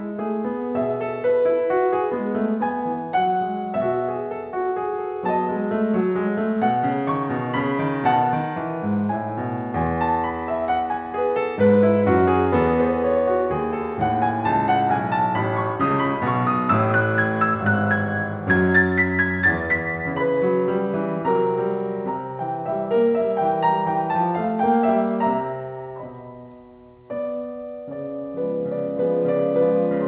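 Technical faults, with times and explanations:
No faults found; the music carries no content above 4 kHz, which fits a narrowband G.711 A-law call path, and that band limit is normal for such a call.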